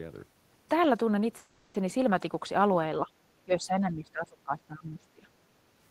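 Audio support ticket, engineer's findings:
Call audio freeze, 1.37–1.76 s: packet delivery stalled, likely a network hold-up draining the jitter buffer. Receiver extended the last sound for about 370 ms as a fading buzz/hiss, no true silence. Playback resumes where it stopped, so nothing lost, but everything after runs about 370 ms later. Audible as a smeared, droning hang.

Speech suppressed in double talk, 3.02–3.11 s: echo canceller, likely confused by simultaneous far-end talk, treated near-end speech as echo. Brief dip of roughly 10 dB.

Same fault, 3.45–5.28 s: likely longer overlap, heavier suppression, deepest roughly 20 dB. About 1.5 s of the span affected; speech turned down while the other side talks.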